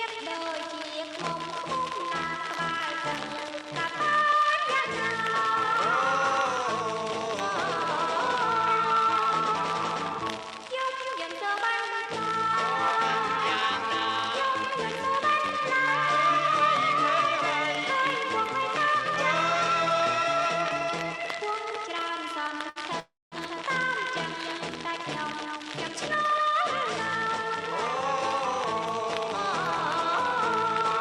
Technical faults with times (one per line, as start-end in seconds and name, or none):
22.69-22.79 short stall from a late packet
23.00-23.35 call audio freeze